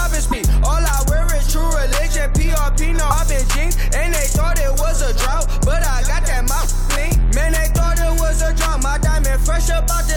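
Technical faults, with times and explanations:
0.30–0.33 s and 3.10–3.13 s, broken MP3 bit reservoir: brief glitches as the audio jumps ahead, likely frames after a cut reading another frame's bytes.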